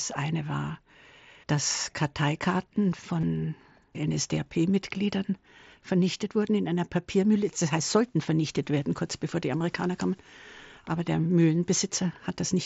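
At 3.21 to 3.23 s, and again at 9.59 to 9.61 s just after "werden kurz bevor die", there is concealed Bluetooth headset packet loss. In each case 22.5 ms of audio, consistent with three lost mSBC frames, was filled by repeating the recent waveform, heard as a brief buzzy blur.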